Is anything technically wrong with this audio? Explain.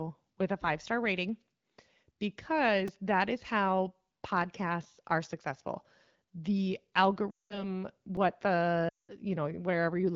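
Yes, there are two kinds of fault, each happening twice, in a speech clip coming through what sounds like an AMR wideband (HD Voice) link at around 12.65 kbit/s.

Repeated buffer, at 2.88 s and again at 8.17 s. The new audio didn't reach the output in time, so the device replayed its last tiny chunk: three extra times at 2.88 s and twice at 8.17 s. Each chunk is about 2.67 ms, which fits a 128-sample buffer. Because the pieces are so short, you hear a quick click or a little buzz rather than an obvious stutter, and essentially no audio is lost.

Lost AMR speech frames, from 7.30 to 7.75 s and from 8.89 to 9.10 s. Radio errors corrupted a stretch of frames, roughly 200 ms' worth each time, which fits a run of about ten 20 ms frames. The AMR decoder covered the gap by reusing the last good pitch and vocal tract settings while lowering the gain. You hear the sound drop to near silence within about two frames, since this is wideband. 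Afterwards the speech comes back weak and a bit rough for a moment.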